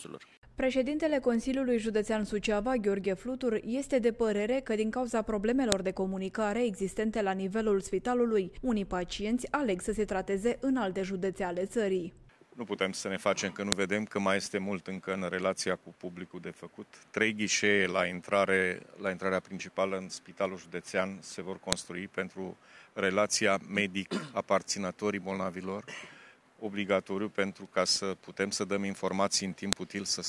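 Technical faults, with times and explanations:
5.72, 13.72, 21.73 and 29.73 s: file header played as audio. Each sharp, loud click marks the start of a new piece, every 8 s. Header bytes were left in when the pieces were joined. They play as raw samples, so the snap ignores the surrounding sound.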